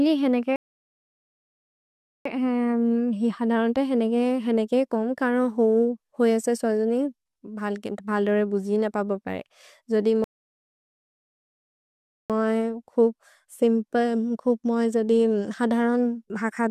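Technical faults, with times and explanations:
0.56 to 2.26 s and 10.24 to 12.30 s, rebuffering stall: The speech stops dead and falls silent twice, for about 1.7 s and then 2.1 s. The second gap comes just after "बुजिन पबोबरे जोदि". Each time the player used up its downloaded audio and waited for more data. When the data arrived, playback picked up exactly where it had paused. No speech is skipped. The pauses only add time to the clip.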